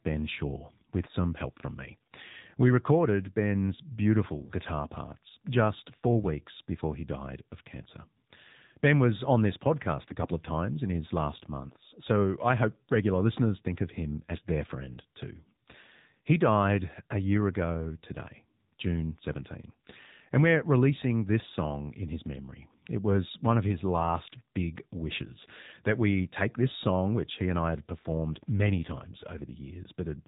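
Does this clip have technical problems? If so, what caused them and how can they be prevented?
Yes. The AMR narrowband mobile codec is audible throughout the whole clip. The speech passes through AMR-NB at 7.4 kbps, a low mode that rebuilds the voice from a vocal-tract model driven by sparse pulses, so it sounds buzzy and synthetic. Because the codec samples at 8 kHz, a spectrogram shows a hard ceiling at 4 kHz with nothing above it, and harmonics look smeared rather than crisp. Using a wideband codec such as AMR-WB, or a higher AMR mode, would prevent this.

AMR bit errors appear from 10.04 to 10.16 s. For about 0.12 s, across five damaged 20 ms frames, the voice keeps its pitch and loudness but turns hoarse and gargly. This happens when the less protected bits in the damaged frames arrive flipped, at a rate of a few percent, while the checksum on the core bits still passes. The decoder then places excitation pulses wrongly and uses skewed gain and spectral values. 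On a spectrogram, the harmonic stripes break into noisy, scattered energy, while the waveform envelope stays about level. A stronger radio link or more robust channel coding would prevent it.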